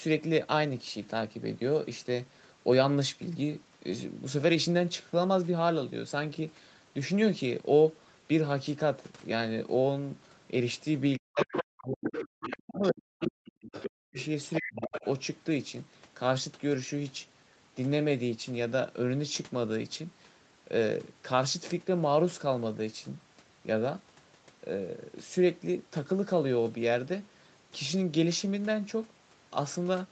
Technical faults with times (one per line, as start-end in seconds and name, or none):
11.18-12.13 speech suppressed in double talk
11.39-11.64 other side's voice leaking through
12.07-12.88 other side's voice leaking through
12.66-14.17 speech suppressed in double talk
13.20-13.27 other side's voice leaking through
13.72-15.08 other side's voice leaking through
14.59-15.04 speech suppressed in double talk